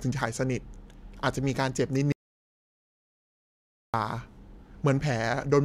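At 2.12 s the speech cuts out dead and stays gone until 3.94 s, an audio dropout to silence about 1.8 s long. The gap is silent, no room tone at all, so the likely culprit is the input link dropping while recording carried on.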